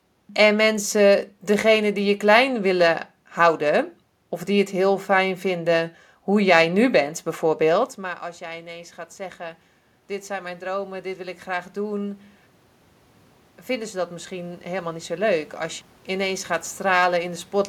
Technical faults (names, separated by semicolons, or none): automatic gain rising